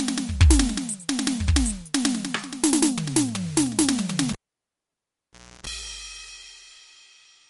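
From the start, the music sounds watery and swirly. Nothing is heard above 11.2 kHz. This is likely MP3 compression at a low rate, which fits about 48 kbps. Short of bits, the encoder cut the treble and dropped weak detail frame by frame.

At 4.33 s a pop marks a cable pulled and plugged in. The music falls to near silence for 1.29 s. A 60 Hz mains buzz then lasts 0.32 s while only the tip touches. Another pop returns the sound at 5.67 s.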